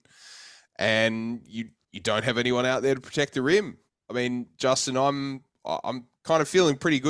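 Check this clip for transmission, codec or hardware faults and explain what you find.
Listening to the speech here, nothing stood out as a technical problem.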